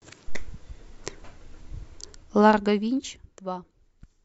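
From 1.86 to 3.34 s there's zipper noise on the speech: the level gets pulled down by around 20 dB, but in hard 1 dB jumps instead of a smooth ramp, roughly ten a second. Every jump is an abrupt discontinuity in the waveform, so you hear a small click each time, and together they make a fine ticking or zipping that rides on the voice while the gain drops.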